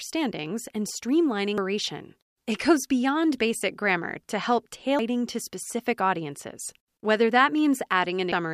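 At 1.58 s and 4.99 s, damaged data in the compressed stream produces brief blips. The decoder misreads corrupted frames, loses sync, then finds the next frame header.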